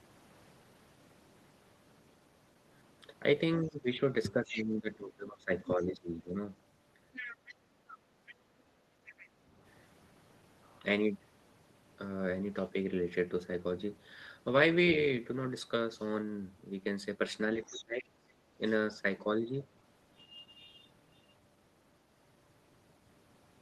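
From 3.59 to 6.4 s the talker's speech dips by roughly 15 dB for about two seconds in total, speech suppressed in double talk, likely the echo canceller ducking both voices at once. Within it, from 3.69 to 4.64 s, the other side's voice leaks through roughly 10 dB below the speech, probably residual loudspeaker echo. It leaks again at a similar level from 7.13 to 9.28 s. From 8.04 to 9.48 s the background is gated by the echo canceller, and the room sound drops by about 8 dB for about a second before recovering. The other side's voice leaks once more from 17.62 to 18.04 s, roughly 15 dB down. From 17.66 to 19.54 s the speech is again suppressed in double talk, with parts falling by roughly 20 dB for under a second in total.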